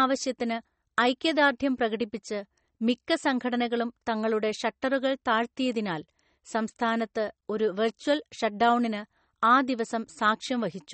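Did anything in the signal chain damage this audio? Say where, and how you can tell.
Yes, at the codec stage, throughout the speech. Nothing comes through above 8.4 kHz, so sibilants sound dull and clipped at the top, and the damage is plainly audible as a watery, swirling texture with smeared consonant onsets. This is likely MP3 compression at a starved bitrate, consistent with around 32 kbps. The encoder cut the treble at a fixed frequency and dropped weak spectral lines that flicker in and out between frames.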